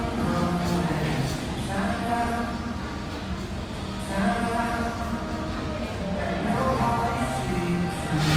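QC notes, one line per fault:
Throughout, Opus compression: the stream was likely squeezed through Opus in its CELT music mode at a low rate, fitting roughly 24 kbps. There weren't enough bits to code each band in detail, so the encoder kept each band's energy and filled the gaps by folding in copies of lower bands or injecting noise. Tonal parts turn rough, grainy and noisy rather than swirling. The bandwidth stays full, reaching about 20.2 kHz, but the damage is plainly audible.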